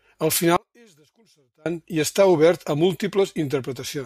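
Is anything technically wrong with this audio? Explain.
Yes. From 0.57 to 1.66 s the speech drops by about 34 dB to a faint residue just before "i està obert a". The likely cause is one channel inverted: its reversed polarity cancels the centred speech in a mono sum. The waveform shrinks to a near-flat band, and the spectrogram fades across the band.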